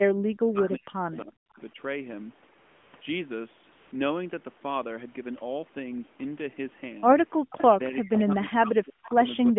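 From 0.45 to 1.78 s the speech dips and breaks up in pieces. The deepest drops are about 40 dB, and about a second of sound is lost in all. This is likely speech suppressed in double talk. Both ends were talking at once. The echo canceller could not tell this talker from its own loudspeaker echo, so it pulled the level down. The same cutting returns from 7.69 to 9.19 s, and again from 9.5 s to the end.

AMR comfort noise appears at 1.46 to 1.50 s and 1.52 to 1.54 s. It returns at 2.60 to 2.94 s, 2.96 to 3.02 s and 3.72 to 3.92 s. In each gap the phone judged the talker silent and stopped sending speech frames. The receiver filled in a synthetic hiss built from a rough level and spectrum. The real background gives way to a smooth, even noise that switches in and out. The longest patch lasts 340 ms.

From 7.5 to 7.63 s a faint delayed copy of the sound slips through. It trails the original by 377 ms and sits roughly 15 dB below it. 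This is likely an echo leak. A loudspeaker at one end fed its microphone, and the echo canceller missed part of it. The leftover was sent back. It is short and scrappy, and it comes just before the second stretch of suppression.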